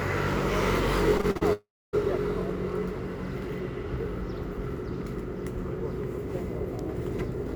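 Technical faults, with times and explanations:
1.17–1.43 s, repeated packet loss (robotic sound): four short holes open in the audio over about a quarter of a second, the longest around 39 ms. Each one is papered over by stretching out the sound that came just before, so nearly half of this span is synthetic fill rather than real signal. With roughly 120 ms missing in total, the result sounds choppy, with small pieces dropped out.
1.53–1.95 s, long network dropout: the sound breaks off for about 400 ms. At first the last bit of audio is drawn out as a fading buzzy continuation, and then about 270 ms of near silence follows before the sound returns further along, with the gap never recovered. This is likely a stretch where no audio reached the receiver, which could only keep the previous sound going briefly before running out of material.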